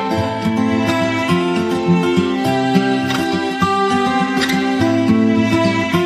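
No technical faults are audible anywhere in this clip.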